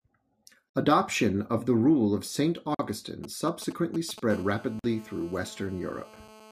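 At 0.69 s the speech drops out for about 52 ms, and again at 2.75 s for 48 ms. This is a gap at a join of encoded pieces: separately encoded segments were spliced without trimming their start delay and end padding. On a waveform each one is a flat, slightly smeared notch, repeating every 2 s.

From 3.24 to 4.20 s, GSM signalling bursts from a nearby 2G phone give a galloping dit-dit-dit of short buzzes, roughly 15 dB below the speech. A spectrogram shows clustered vertical stripes with a 217 Hz harmonic comb.

From 4.30 s to the end, GSM phone buzz takes over: a steady, raspy 217 Hz buzz at about -24 dB relative to the speech, from a phone in a call. It draws continuous evenly spaced horizontal harmonic lines across the spectrogram.

Within that stretch, a third join gap at 4.79 s cuts the sound for 48 ms, again every 2 s after the previous one.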